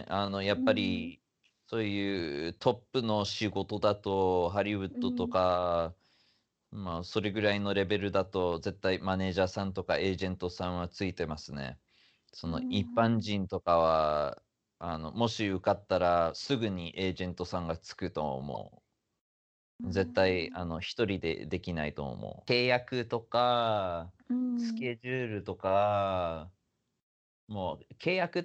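At 18.54 to 18.57 s the speech is interrupted by a corrupt frame decoded: a short burst lasting about 26 ms, which points to a few damaged frames. Flipped bits made the decoder place energy at wrong frequencies. Unlike a concealed loss, there's no smeared repeat.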